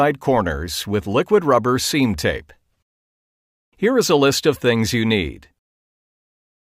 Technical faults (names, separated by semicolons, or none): none